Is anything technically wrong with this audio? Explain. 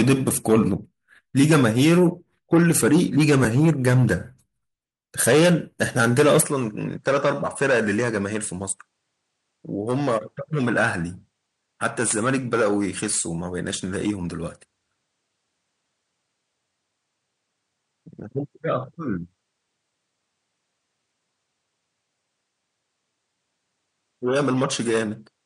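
Yes. From 6.42 s onward the speech turns duller and about 5 dB quieter, with nothing above 10.3 kHz and a faint new noise floor, likely an input switched to a poorer device.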